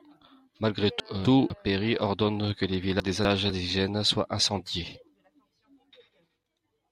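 A speech clip with two brief jumbled moments: from 1.0 to 1.5 s, and from 3.0 to 3.5 s between "ordonne que les" and "soient incendiés". Both are chunks out of order: a 250 ms chunk arrived one chunk late and played after its successor, leaving hard joins.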